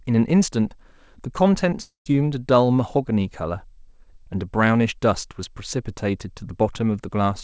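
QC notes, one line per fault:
1.82–2.08 s, long network dropout: about 240 ms of sound never arrives. The receiver stretches the last bit into a buzz that fades, then there's roughly 130 ms of near silence before it resumes past the gap. Likely packets lost on the call path, which cuts everything above 8 kHz.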